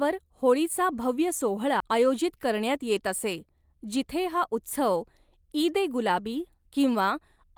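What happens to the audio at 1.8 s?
A CD skip hits at 1.80 s: the laser jumps to another turn of the spiral, so a tick and a brief mute of a few milliseconds give way to speech resuming elsewhere.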